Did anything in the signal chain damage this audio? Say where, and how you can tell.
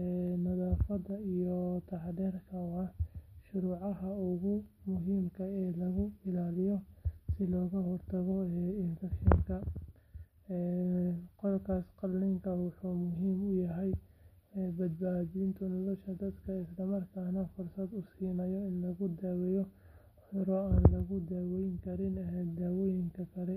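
Yes, it's the Bluetooth codec stage, with two SBC bit pool drops, at 5.27 to 6.79 s and again at 14.64 to 16.98 s. In both stretches the top end of the speech goes dull and a gritty, grainy noise rides on it, then clears when the rate comes back. That fits the bit pool falling from 31 to 15, roughly 105 kbps, so the highest sub-bands get starved and everything else is quantised coarsely.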